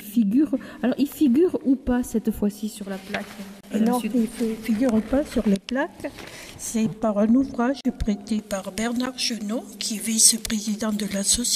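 Blocks of digital silence appear at 3.61 s (about 29 ms), 7.81 s (about 41 ms) and 9.06 s (about 12 ms, which fits a 512-sample buffer). Each time, the output buffer was likely left as zeros, so the sound drops out abruptly and returns with no fade. The longer two sound like brief holes, and the last like a tick.

Pre-emphasis left on starts at 8.39 s and continues to the end. The treble boost, consistent with a J.17 curve, was never undone, leaving 10 kHz about 11 dB too strong relative to 1 kHz, so the sound turns thin, bright and sibilant.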